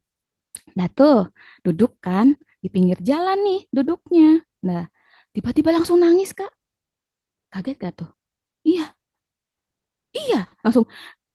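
Nothing here counts as a fault; the speech simply comes through the Opus voice compression, running in its hybrid mode at 24 kbps, with only the light coding wear you'd expect from that setting.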